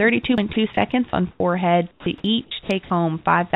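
At 0.37 s a CD skip produces a tick and a very brief mute, after which playback resumes from a different point on the disc's spiral, so the speech jumps abruptly.

The sound is chopped by the voice detector from 0.53 to 0.77 s, 1.10 to 1.40 s and 1.91 to 2.90 s. About 60, 120 and 330 ms of speech are replaced by comfort noise. The likely cause is a sender-side detector toggling transmission on quiet passages.

At 3.50 s the sound is dropped by the voice detector. Roughly 20 ms of speech gives way to a short stretch of steady noise, likely because the detector mistook a quiet ending for background.

Across the clip the band stops at 4 kHz, consistent with a G.711 A-law call codec at 64 kbps.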